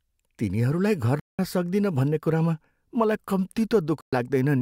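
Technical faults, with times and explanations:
1.20–1.39 s and 4.01–4.13 s, Bluetooth dropout: the speech cuts to silence with abrupt or very briefly faded edges, for about 190 ms and then about 120 ms, and resumes further along as though it had kept playing underneath, so the missing stretch is skipped rather than delayed. The likely cause is audio packets failing to reach the headphones in time and being discarded, with the gap lengths fitting short bursts of lost packets before good ones arrived.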